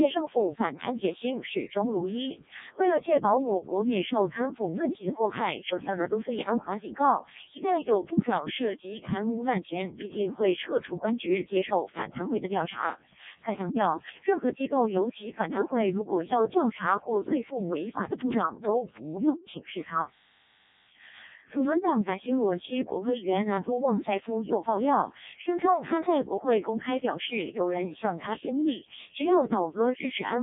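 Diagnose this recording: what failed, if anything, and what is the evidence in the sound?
Codec stage: a Codec 2 vocoder, fitting its 0.7 kbit/s mode, resynthesised the speech from sine waves, so it is robotic and buzzy throughout, with nothing above 3.8 kHz.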